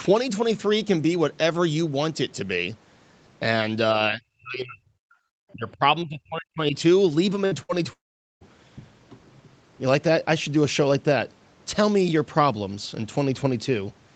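From 4.1 to 4.93 s and again from 5.52 to 6.75 s, the speech dips sharply, by roughly 40 dB at its deepest, for about 0.7 s and then about a second in total. This is likely speech suppressed in double talk, where the echo canceller mistook near-end speech for loudspeaker echo and attenuated it.

At 7.45 to 7.54 s and 7.63 to 7.72 s come two bursts of packet loss, each dropping about 60 ms of audio. The receiver briefly extends and fades the last sound before playback jumps ahead.

From 7.93 to 8.44 s, a longer gap of about 480 ms is likely a long network dropout. The concealment fades quickly, leaving about 440 ms of silence before the speech resumes with that stretch missing.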